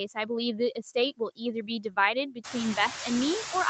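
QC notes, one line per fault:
Throughout: noise suppressor artifacts. The background is pulled down only about 2 dB frame by frame. A spectrogram shows a patchy, flickering noise floor.
1.17–1.41 s, 1.67–1.97 s, 2.31–2.55 s: speech cut by the noise suppressor. The suppressor takes soft speech for noise, dropping it up to about 17, 9 and 12 dB for roughly a tenth of a second each. The waveform shows dips and the spectrogram faded speech energy.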